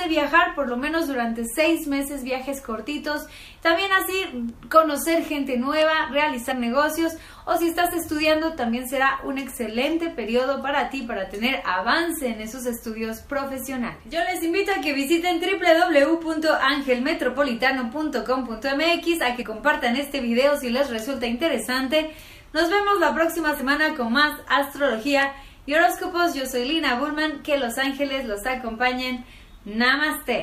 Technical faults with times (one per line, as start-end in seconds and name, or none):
6.50 compressed frames skipped
19.41-19.43 compressed frames skipped
23.59 compressed frames skipped